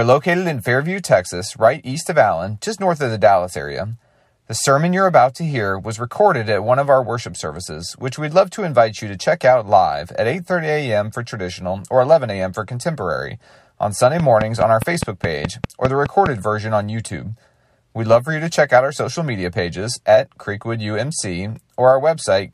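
From 14.2 s to 16.27 s there's a train of clicks: around ten sharp, near-identical pops at a steady 4.8 per second, standing well above the speech and audible in the gaps too. It's likely interference or a faulty connection or power supply.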